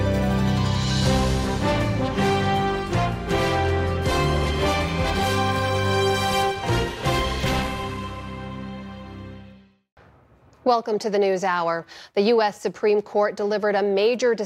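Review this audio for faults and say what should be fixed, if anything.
Nothing here needs fixing; no faults were found.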